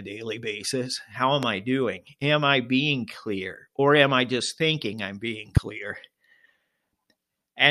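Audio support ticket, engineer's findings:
Loud pop, 1.43–1.45 s and 5.57–5.59 s: likely voltage step from a connector, switch, static discharge or driver glitch, shaped by downstream circuitry. Single sharp pop each time, about 15 dB and about 20 dB above the speech, which continues underneath.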